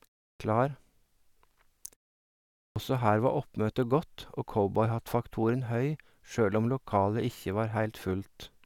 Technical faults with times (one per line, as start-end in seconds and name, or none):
0.36-0.40 clipped start after a pause
2.72-2.76 clipped start after a pause